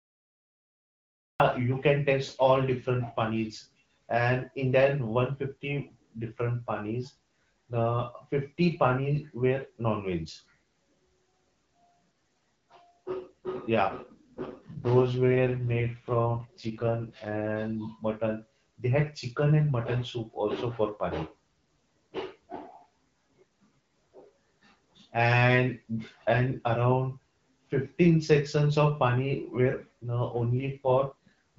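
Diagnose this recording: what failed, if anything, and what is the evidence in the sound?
A cut-off start, at the storage or capture stage: the speech begins at 1.4 s out of digital silence, landing in the middle of a sound with no natural attack or fade-in. The recording or stream simply began late, so the opening of that utterance was never captured. What is missing is the onset itself, not a quiet lead-in.

An AMR rate drop, at the network and codec stage, from 13.81 to 17.48 s and again from 30.58 to 31.13 s. In both stretches the speech turns rougher and more synthetic, with no gap and no loss of bandwidth. The sound points to a weak radio link where the network ordered the AMR-WB encoder down from 12.65 to 6.6 kbit/s, spending bits on error protection instead. Outside these stretches the HD Voice codec shows only light damage.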